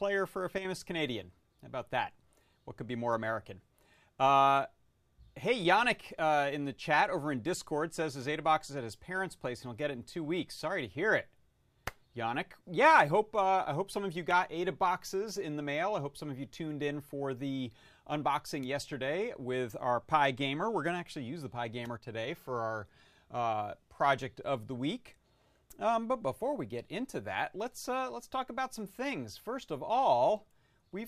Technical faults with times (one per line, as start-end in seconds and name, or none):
0.58-0.65 one channel drops out
21.97-22.03 one channel drops out